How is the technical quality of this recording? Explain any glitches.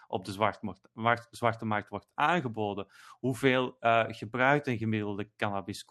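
Nothing's going wrong here: the speech comes across like an ordinary call line, with the top end rolling off around 12 kHz in a way that fits an Opus path running at something like 32 kbps, and there aren't any glitches to explain.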